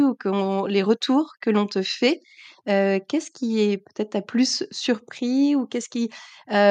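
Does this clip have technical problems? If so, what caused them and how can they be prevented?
No, there are no technical problems to report here.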